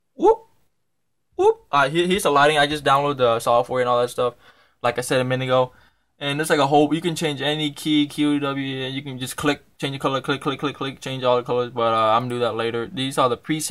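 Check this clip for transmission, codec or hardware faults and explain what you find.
Two brief clicks stand out, at 8.04 s and 12.52 s, and both sound like dropped samples. Each is a single sharp tick with no gap in the sound around it. The likely cause is a couple of samples going missing from the stream, a small fraction of a millisecond each time, so the waveform steps abruptly from one value to a later one. On a waveform this shows as a tiny discontinuity; on a spectrogram, as a thin vertical line spanning the frequency range.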